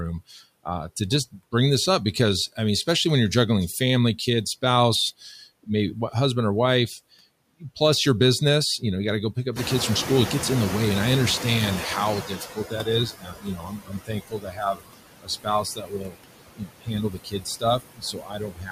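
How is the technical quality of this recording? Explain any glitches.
The recording is marred by noise suppression problems throughout, and they get worse in the second half, where the suppressor starts eating into the speech itself.

Noise suppressor artifacts run through the whole clip. The suppressor works frame by frame, pulling down any band it judges to be steady noise, here by about 20 dB. That leaves the background rising and falling with the speech, sinking in pauses and swelling underneath syllables.

The noise suppressor is catching up from 9.55 to 13.15 s. Around 9.5 s the room noise jumps by about 18 dB, to roughly 10 dB below the speech. The room noise is simply part of the environment, but the suppressor's noise estimate lags behind it, taking 3.6 s to adapt. During that stretch the louder background comes through with only about 15 dB of reduction, then gradually sinks as the estimate settles.

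Speech is cut by the noise suppressor in four places: 12.23 to 12.87 s, 13.11 to 14.83 s, 15.22 to 16.17 s, and 16.56 s to the end. The suppressor mistakes parts of the speech for noise and turns them down along with the background, by about 14 dB in the first spot and about 20 to 22 dB in the later ones. Affected portions range from about a third of a second to about a second and a half. The affected speech sounds swallowed or faded.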